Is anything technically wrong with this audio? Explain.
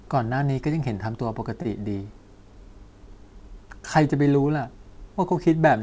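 Yes. A short stall from a late packet occurs at 1.62 to 1.67 s in this speech. A packet arrived late and the jitter buffer ran dry. The receiver stretched the last sound for about 29 ms, then resumed where it stopped. Nothing is lost, but the sound hangs briefly with a slight buzz or dip. Playback runs 29 ms later from then on. The band ends at 8 kHz, which fits a G.722 call codec.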